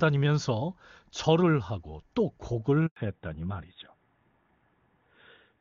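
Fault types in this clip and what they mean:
handover gap: The call switches networks and no speech frames reach the receiver for 100 ms, so the sound drops out abruptly at 2.86 s and stays silent until 2.96 s, when the new link starts. Anything spoken during that interval is lost.
fallback to narrowband: From 2.96 s to the end, the call runs on an older narrowband codec instead of HD Voice. All content above 4 kHz vanishes, and the speech turns duller and rougher than the clear wideband section before, whose quality fits a high-rate AMR-WB mode.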